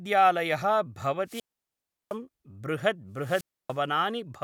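Wireless microphone squelch dropouts occur at 1.25 to 2.16 s and 3.17 to 3.81 s. In each, the FM radio signal fades until the receiver's squelch cuts the output, leaving near-silent holes of about 0.71 s and 0.29 s before the speech returns.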